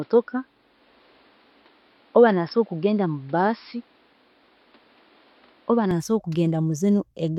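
Speech, dull with nothing above 5.4 kHz and a new noise floor about 35 dB down, until 5.91 s, when it clears without a gap or level jump, likely an input switched to a poorer device rather than simple filtering.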